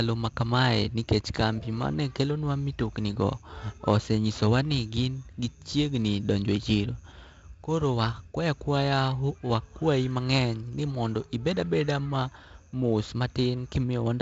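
No faults found in the speech; the G.722 wideband telephone coding shows only its band edge near 7.8 kHz and a light coding hiss, which fits the 48 kbit/s mode.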